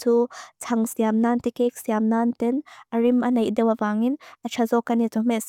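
A short bit of speech with nothing technically wrong with it that I can hear at any point.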